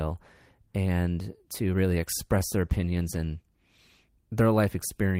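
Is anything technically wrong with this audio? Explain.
Yes. A call bitrate drop runs from 1.91 s to 4.11 s, starting just after "and to". The call's bandwidth estimate fell and the encoder was given far fewer bits, consistent with a fall from 32 kbps to around 17 kbps for about 2.1 s. The speech is coded more coarsely and sounds rougher until the bitrate recovers.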